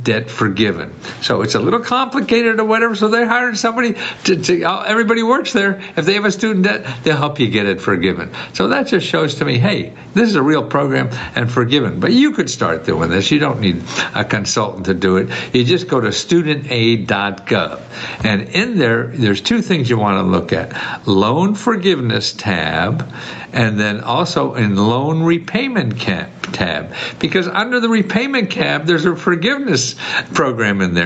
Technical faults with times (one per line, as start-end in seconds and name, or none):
0.00-31.05 gain pumping